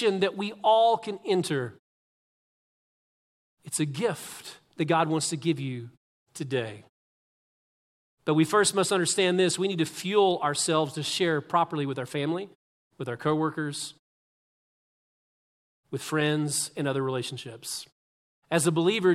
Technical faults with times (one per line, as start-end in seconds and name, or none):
none